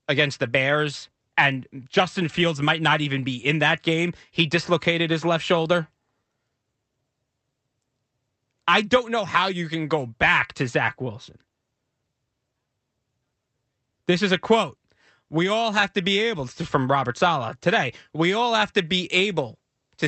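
No technical faults are audible.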